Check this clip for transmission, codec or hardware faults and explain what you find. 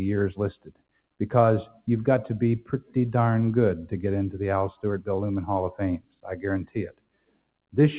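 The faults here come from processing rather than hardware: a speech noise suppressor is working against the sound throughout, and it audibly cuts it at five points. All of this sits inside a narrowband call path whose band stops at 4 kHz, which fits G.711 mu-law.

Noise suppressor applied to music or sounds, throughout the clip: A suppressor designed for voice keeps classifying sustained, steady content as noise. It pulls the gain down on those sounds and lets it back up when something sharper arrives. The level swings by roughly 15 dB as a result. Onsets survive, but held portions and decays sag, so the sound pumps and thins out.

Sound cut by the noise suppressor, at 0.52–1.2 s, 1.66–1.87 s, 2.61–2.96 s, 5.98–6.44 s and 6.64–7.75 s: In these spans the suppressor turns the sound down more than the rest, by up to about 21 dB (about 18 dB in the second span and about 13 dB in the third). 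The sound there dips away or has its tail chopped short. The longest span, near the end, leaves about a second of audio sunk.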